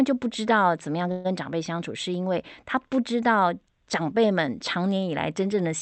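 From 1.11 to 1.27 s a call audio freeze smears the speech into a short buzzy hiss that fades over about 130 ms before the speech resumes intact, only later. Packets were likely delayed, emptying the jitter buffer, so the receiver stretched the last sound rather than dropping anything.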